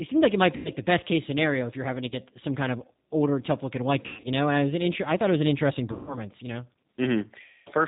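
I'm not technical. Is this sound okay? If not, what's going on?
No. The whole recording went through the G.729 codec, a phone-call compressor. It cuts off the high sounds, so speech comes out rough, muffled and slightly robotic.

There is also VoIP packet loss concealed by the speech codec. Bits of the call went missing, and the phone guessed to fill them. You hear a buzzy, fading smear, with weak sound just after. This happens at 0.56 to 0.71 seconds, after "seemed like it might". It happens again at 2.09 to 2.15 seconds, after "if you're having to", and at 4.06 to 4.29 seconds. The last two are at 5.93 to 6.19 seconds, after "it was an interesting", and at 7.44 to 7.69 seconds.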